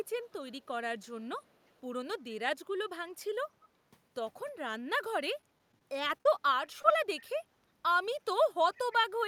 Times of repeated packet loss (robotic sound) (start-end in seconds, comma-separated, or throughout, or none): 5.41-6.26